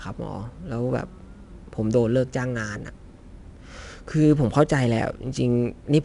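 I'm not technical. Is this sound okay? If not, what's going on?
No. The speech has been squeezed with 4-bit ADPCM compression, a simple old-style way of shrinking audio, and the damage is plainly audible from start to finish. Each moment is stored as a rough guess at how the sound changed, so a gritty hiss rides on the louder syllables and drops away in the pauses. That's the tell: ordinary background hiss stays steady, while this rises and falls with the voice. The highest tones also stop at about 10.6 kHz, taking some crispness away.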